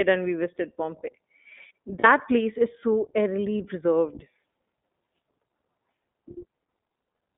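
Throughout, the speech passes through the iLBC codec, a narrowband VoIP coder that encodes each frame's excitation independently. Its damage is plainly audible: the voice sounds clear but slightly rough and synthetic, and the line band runs from about 200 Hz to 3.6 kHz. On a spectrogram, energy stops sharply near 3.6 kHz with nothing above it, and the lowest band is thinned. The character fits the 15.2 kbps mode with 20 ms frames.

From 2.00 to 2.06 s, and again from 3.58 to 3.61 s, come lost iLBC frames. The first gap lasts 40 ms and the second 20 ms, which fits two 20 ms frames and then one. The decoder fills each hole by repeating the last pitch cycle mixed with noise, so it sounds like a brief held, faintly buzzy vowel. The voice recovers almost at once. On a spectrogram, each gap shows as flat, smeared harmonic bands. The waveform shows a short run of near-identical cycles.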